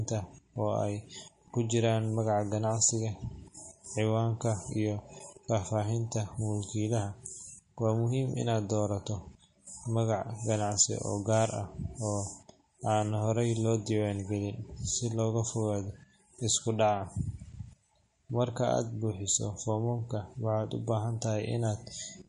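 Throughout, the speech has a watery, swirling treble and smeared consonants, likely MP3 compression at about 40 kbps; a spectrogram shows a hard ceiling at 10.6 kHz with flickering, patchy upper bands.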